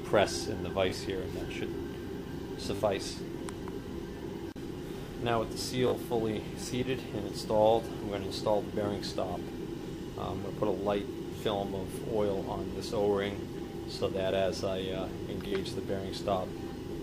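Repeated buffer stutters occur at 0.90–0.92 s, 2.76–2.80 s, 5.88–5.92 s and 15.48–15.52 s. Fresh audio arrived late, so the last short block, which fits a 20 ms buffer, replayed once the first time and twice at each later stutter. Unlike a dropout, there's no silence, just a brief, hard-edged click or buzz.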